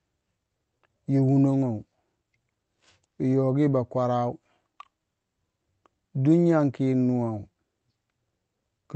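Nothing here is technically wrong: it's a short stretch of speech that came through a call connection, and the top end tapering off at around 8 kHz is just what that kind of link does, not a fault.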